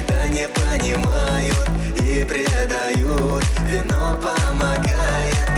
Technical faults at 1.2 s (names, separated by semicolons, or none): resampler restarted on every block